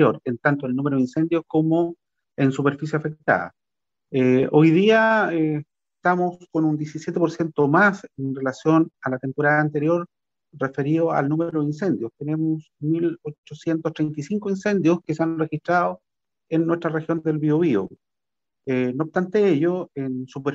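No technical faults can be heard anywhere in the clip.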